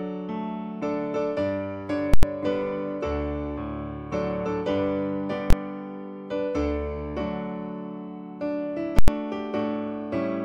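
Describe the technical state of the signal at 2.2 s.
At 2.2 s the signal is pinned at one extreme value, an invalid numbers at full scale fault running from 2.14 s to 2.23 s, about 93 ms, which fits a 4096-sample processing block. A calculation in that block returned infinite or invalid values, and these were forced to the maximum positive or negative sample value. The output holds flat at one extreme value, far from zero and beyond the audio's peaks, so the listener hears a very loud pop at the block's start and another at its end, with no sound between.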